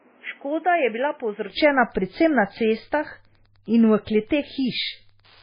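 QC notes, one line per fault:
throughout: MP3 compression, likely at a low bitrate. Watery, swirly speech with smeared attacks and nothing above 5 kHz, as starved frequency lines drop in and out.
0.00–1.50 s: input switched to a poorer device, likely. Duller, boxier sound cut off above 3.3 kHz, about 5 dB quieter, with new noise about 30 dB down, from a narrower-band input. No silence at the switch.
1.83–5.42 s: Wi-Fi interference. Steady ticking about ten times a second, every 102.4 ms and about 40 dB below the speech, as a nearby radio's beacon is rectified.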